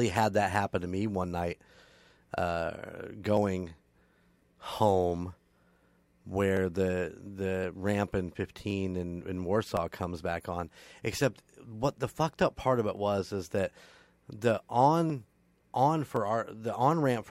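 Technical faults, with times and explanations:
0.17 to 17.23 s, clock drift buffer slips: a click recurs every 1.07 s, about fifteen in all, likely from two clocks differing by roughly 700 ppm, so a few tens of samples drop or repeat. The waveform shows small step discontinuities, the spectrogram thin evenly spaced vertical broadband lines.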